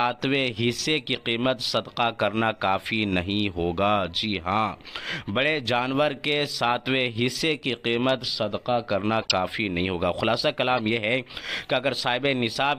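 Corrupt frames decoded at 1.15–1.23 s, 9.22–9.32 s (loudest) and 10.77–10.79 s: damaged bits misplace energy across a few frames, showing as stray spectrogram blocks and brief waveform glitches.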